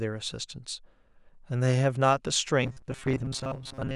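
From 2.63 s to the end, the speech hardens into a rigid, metallic buzz at 133 Hz that loosely follows the words. This is robotic sound from repeated short buffers, likely from audio arriving too seldom, so a roughly 7.5 ms segment repeats through most of the stretch.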